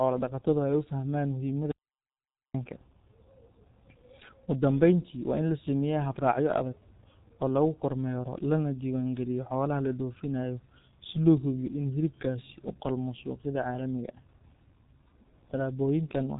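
From the first moment to the end, the speech has passed through a G.723.1 codec at a very low bitrate, consistent with roughly 6.3 kbit/s. The codec models the voice in 30 ms frames and refreshes that model slowly, and here the damage is heavy. Nothing survives above 3.8 kHz, so the speech sounds muffled and hoarse, and consonants smear into one another.

At 1.72 s the signal cuts out to silence and returns at 2.54 s, a gap of about 830 ms. This is an audio dropout to silence, most likely caused by the input being lost briefly while the recording chain kept writing silence. No room tone remains in the gap, so the speech stops abruptly and resumes mid-flow, and whatever was said during that interval is missing.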